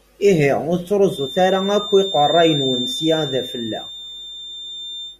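From 1.04 s to the end, a feedback whistle sits behind the speech. It is a thin, steady tone at 3.6 kHz, roughly 10 dB below the voice, swelling and fading slowly in level. The likely cause is a loudspeaker-to-microphone loop held just at the edge of feedback.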